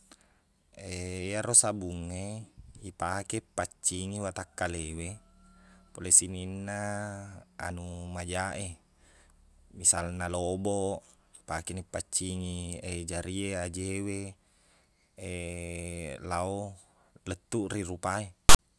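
At 18.49 s, just before the end, file tags are played as audio for about 0.1 s. A block of text metadata is decoded as sample data, producing a loud, hard-edged rasp offset to one side, followed by dead silence where the zero padding is read.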